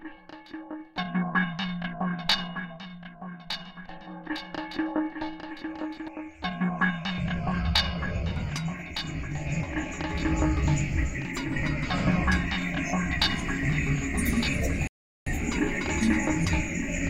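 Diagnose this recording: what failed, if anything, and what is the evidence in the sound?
Between 3.52 and 6.08 s a doubled audio track is audible. A second full-band copy of the sound trails the original by about a second, sitting roughly 5 dB lower, with no decay or room colouring. It cuts in and out abruptly at those boundaries. The stage is likely a routing or capture fault, with a slower parallel path or an edit leaving a second out-of-step copy in the mix.

At 14.87 s a rebuffering stall occurs at the playback stage. The sound drops to silence and resumes at 15.27 s exactly where it left off, with no content skipped, so about 0.39 s is added to the timeline. This is the player draining its buffer of downloaded audio and pausing until enough data arrived to continue.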